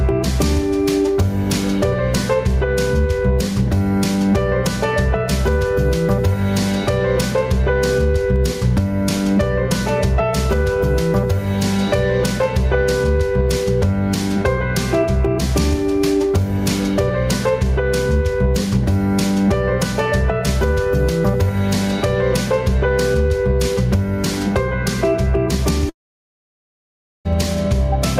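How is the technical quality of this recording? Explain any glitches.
The recording has two problems: gain pumping throughout, and a long gap near the end.

Gain pumping runs the whole way through. Loud and soft parts are pulled closer together, so levels keep breathing by around 10 dB. The likely cause is an input gain set far too high, with a fast limiter clamping down on every peak and then releasing. On a waveform the envelope looks flattened and squashed, and on a spectrogram quiet stretches look nearly as strong as loud ones.

A long network dropout occurs from 25.89 to 27.27 s, and about 1.36 s of audio is lost outright. The receiver briefly carries the last sound forward as a fading buzz or hiss, then plays about 1.31 s of silence before the audio resumes, with the missing section skipped. That behaviour is the likely result of packets failing to arrive. On a waveform it appears as a short decaying tail followed by a flat line, and a spectrogram shows a smeared sliver and then an empty band.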